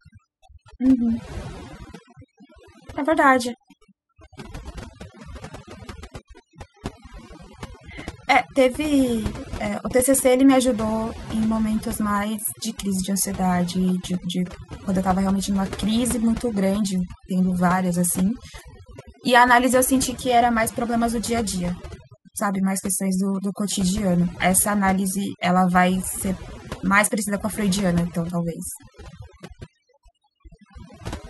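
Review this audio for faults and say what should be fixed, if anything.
Overdone noise removal runs through the whole recording: the denoiser gates individual bands whenever they sit near its noise estimate, taking quiet parts of the speech with them. The result is speech over near-silent background with twinkling specks. A spectrogram shows scattered isolated dots between words. To prevent it, use a gentler reduction setting so bands are attenuated rather than removed.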